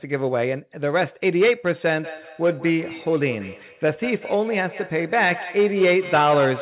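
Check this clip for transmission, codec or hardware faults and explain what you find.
One transmission fault is present: feedback echo between two devices. The call path band-limits the audio to 4 kHz, which fits G.711 mu-law coding.

From 2.03 s to the end, a feedback echo between two devices repeats the speech at intervals of about a fifth of a second, at up to about 14 dB below the direct speech. A second device in the room is replaying the call, and its sound re-enters the microphone. The echo canceller cannot remove it because it only subtracts its own device's playback.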